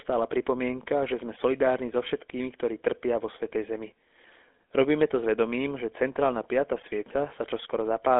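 Throughout the speech, GSM full-rate codec coding, fitting 13 kbps, adds buzzy, gravelly roughness; the spectrogram shows energy confined between 250 Hz and 3.5 kHz.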